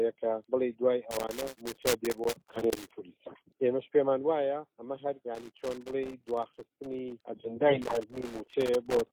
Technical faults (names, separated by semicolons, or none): loose connector crackle